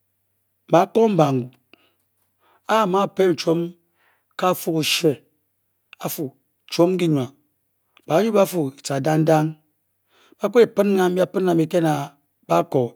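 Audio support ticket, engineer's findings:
Nothing to flag on this speech recording: listened all the way through and found no faults to report.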